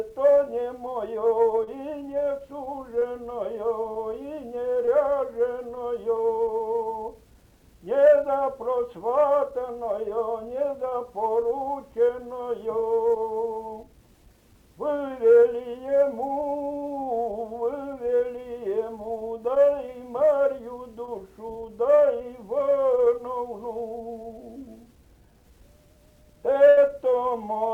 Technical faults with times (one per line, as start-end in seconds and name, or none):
1.63-1.69 short concealed packet loss
2.99-3.03 short concealed packet loss
4.85-4.89 short concealed packet loss
10.89-10.93 short concealed packet loss
21.05-21.09 short concealed packet loss
26.69-26.79 burst of packet loss